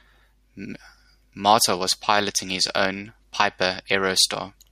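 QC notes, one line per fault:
No faults found in the speech. Nothing here needs a flag.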